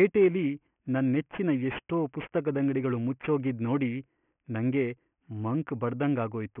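Aliasing runs through the whole of this speech clip: the audio was taken down to a 6 kHz sample rate without a low-pass filter first, so energy above the 3 kHz fold point mirrors back as false, unrelated tones, roughly 20 dB under the voice, making sibilants gritty and metallic.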